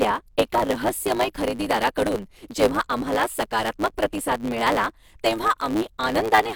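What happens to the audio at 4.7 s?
At 4.7 s the speech carries a block size mismatch (truncated), present throughout. Each block's tail is discarded, causing a 109 Hz buzz and speech running 1.09 times fast with its timbre kept.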